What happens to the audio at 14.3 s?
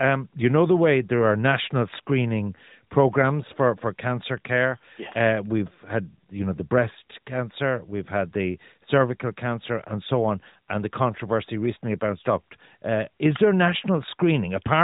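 Nothing goes wrong at 14.3 s: the speech carries on intact there, still heard through the AMR narrowband mobile codec, which passes nothing above about 3.8 kHz.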